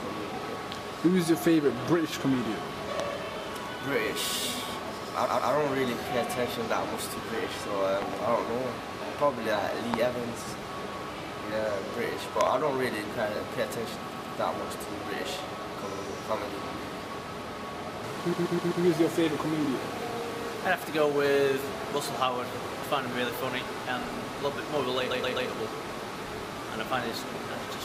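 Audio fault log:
3.00–3.02, 8.02–8.15, 9.94–9.96 and 12.41–12.49 s: loud pop. Sharp pops about 15 to 20 dB above the sound, two each at 8.02 and 12.41 s. A likely voltage glitch adds the pulse.
5.25–5.51, 14.12–14.38, 15.91–16.04, 18.32–18.83 and 25.10–25.49 s: repeated frames. A 128 ms block, or 64 ms at 15.91 s, replays two to four times, giving stutters.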